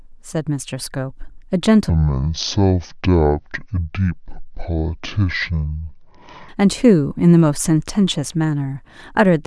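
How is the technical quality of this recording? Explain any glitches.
The recording has one clear glitch: a section at the wrong speed. From 1.89 to 6.49 s the speech runs at 0.55 times its proper rate, likely from playback against a mismatched clock. Pitch falls by about ten semitones and timing stretches together, abruptly, unlike a pitch-shift effect, which would keep the original pace.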